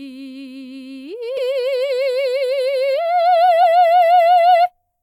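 At 1.37 s and 3.62 s the music breaks into a brief blip. This is damaged data in a compressed stream: corrupted bytes make the decoder lose frame sync.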